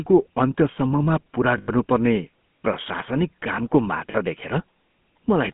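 From start to finish the speech has a buzzy, gravelly roughness and a boxed-in, phone-line tone, with nothing above 3.4 kHz and little below 150 Hz. This is the GSM full-rate codec, and the damage is plainly audible. The codec rebuilds the voice from a vocal-tract model driven by a coarse, regularly pulsed excitation that keeps only a fraction of the detail, which gives the texture that fits a 13 kbps full-rate stream.

From 1.58 to 1.70 s, just after "अन्त्यसम्ममा पुरा", the sound is smeared into a rough, metallic ring that lasts about 100 ms, which fits five lost GSM frames in a row. For the missing frames the decoder reused the last good frame's settings, so the sound is held and buzzes rather than dropping out. A shorter lost GSM frame follows at 4.12 to 4.15 s, after "प्रशासनिक कामको". About 20 ms, a single frame, is patched the same way and heard as a brief metallic catch.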